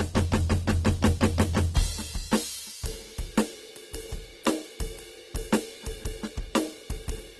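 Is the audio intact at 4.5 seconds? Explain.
No. At 4.5 seconds, as across the whole clip, the music sounds grainy and rough with nothing above 12.2 kHz, likely Opus compression filling starved bands with noise at a low bitrate.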